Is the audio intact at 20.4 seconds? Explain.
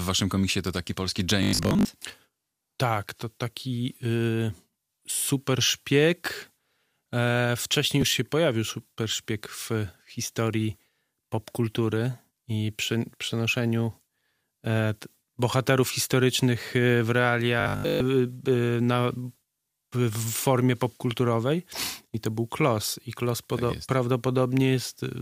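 Yes, the audio is intact at 20.4 seconds, with nothing there that interrupts or damages the sound.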